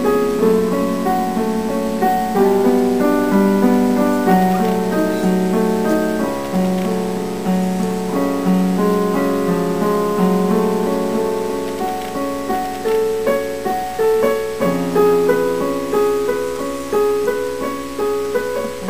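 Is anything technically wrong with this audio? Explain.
Yes. A steady, raspy mains buzz runs through the whole clip, sitting roughly 25 dB below the signal. Sharp switching spikes from a dimmer, rectifier or unshielded line enter twice per 60 Hz cycle, spraying harmonics up into the kilohertz range.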